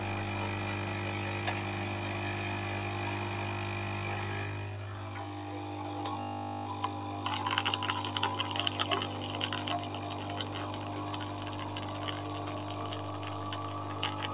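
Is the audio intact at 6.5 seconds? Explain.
No. From 6.2 to 6.66 s there's a system hang loop. The machine or audio driver stalled, but the sound hardware kept replaying the same 20 ms chunk of its ring buffer, over and over. Because the loop is so short, it repeats 50 times a second and comes out as a steady 50 Hz buzz instead of a stutter. About half a second of real audio is gone, replaced by that drone.

On top of that, a noise suppressor applied to music or sounds is running through the whole clip, including this spot. It's a speech-oriented suppressor treating steady tones, ambience and tails as noise and pulling them down. Onsets mostly get through while anything sustained sags, with the level swinging by a few dB, so the sound pumps and thins out.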